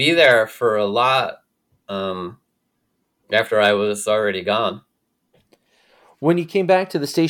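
No technical faults are audible.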